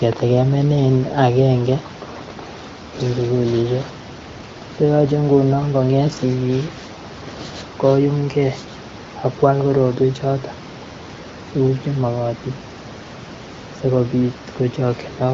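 No faults found in the speech; room noise sits about 16 dB below it, and the band limit near 7 kHz with light coding texture points to AMR-WB HD Voice at a mid-to-high rate around 16 kbit/s, working as expected.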